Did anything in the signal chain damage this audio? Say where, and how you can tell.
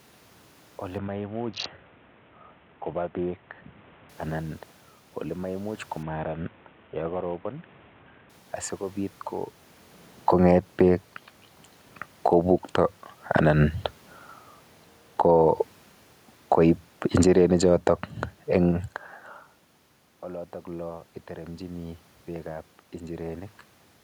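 Yes. At the Bluetooth codec stage, an SBC bit pool drop hits from 0.98 to 4.09 s and again from 6.03 to 8.30 s. Congestion made the encoder starve the top sub-bands, so the treble dulls and gritty noise rises, which fits bit pool 28 falling to 5.

In call processing, automatic gain falling runs from 10.13 to 18.9 s. The AGC judged the input too loud or its background noise too strong and eased its gain down by about 6 dB, so the speech and the room noise sink together, unlike the talker's movement near 9.5 s.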